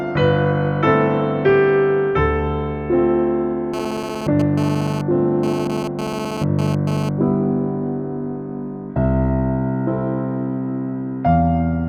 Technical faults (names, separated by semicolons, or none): GSM phone buzz